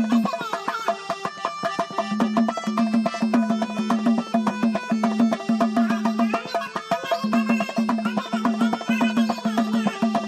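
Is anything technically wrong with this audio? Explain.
Yes. Throughout, everything plays twice as fast and an octave high: the audio is read two samples at a time, so sample pairs become single frames.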